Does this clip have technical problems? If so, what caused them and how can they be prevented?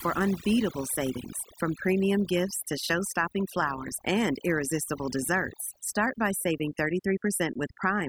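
Yes. Throughout the speech, the gaps fall to near silence with twinkling specks. That is overdone noise removal: the reduction was set so hard that any frequency band close to the noise estimate got cut, taking quieter vocal detail too. Preventing it means using gentler reduction settings or recording with less background noise to begin with.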